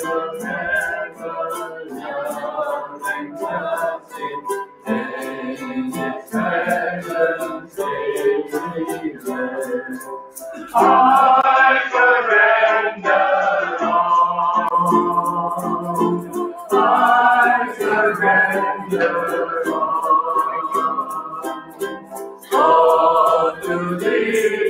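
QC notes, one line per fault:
Throughout: noise suppressor applied to music or sounds. A speech-tuned suppressor stayed active and read sustained, steady material as noise, so gain swings by around 10 dB. Attacks pass while held parts and tails duck, making the sound pump and thin out.
0.27–6.34 s, 7.58–10.39 s, 16.25–16.72 s, 21.02–22.52 s: sound cut by the noise suppressor. The suppressor clamped down hardest here, pulling level by up to about 13 dB (about 7 dB at 16.25 s), so steady and decaying sound sinks or ends early while abrupt onsets survive.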